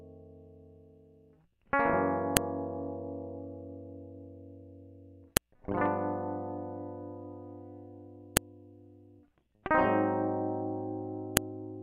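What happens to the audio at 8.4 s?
A file header played as audio produces a sharp, loud click at 8.37 s in this music. Where two separately encoded WAV pieces were joined, the second piece's header bytes were left in place and decoded as sample values. For about a millisecond the output jumps to arbitrary levels unrelated to the music, which the ear hears as a snap. The placement fits a stream assembled from pieces about 3 s long.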